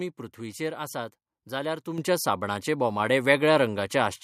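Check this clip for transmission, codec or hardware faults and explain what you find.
One fault stands out: a microphone volume stepped up at 1.98 s. The level of the speech jumps by about 7 dB in a single step. The background noise jumps with it. That shared rise is the clue. Call software judged the microphone too quiet and raised the device's input volume at once. The change happens before any processing, so everything in the signal gets louder together. It sounds like a sudden jump in loudness.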